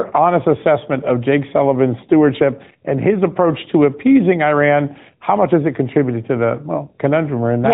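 Throughout the speech, the AMR narrowband mobile codec squeezes everything into 8 kHz telephone sampling, so nothing above 4 kHz survives, a hard flat ceiling on a spectrogram. Its pulse-driven vocal-tract model leaves a plainly buzzy, synthetic edge, which fits an upper-rate mode around 10.2 kbps.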